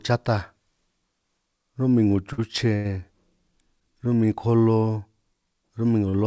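At 2.33 to 2.40 s, 2.76 to 2.87 s and 6.09 to 6.15 s the speech briefly freezes in three short stalls from a late packet. Each time, the jitter buffer ran dry and the receiver stretched the last sound for 50, 87 and 42 ms until the delayed audio arrived. It then resumed where it left off, so nothing is lost, but a sound hangs with a faint buzz or dip. On a spectrogram the harmonics run flat and unchanging across each gap, all sitting below the 8 kHz ceiling of the call path. The waveform shows near-identical repeated cycles there.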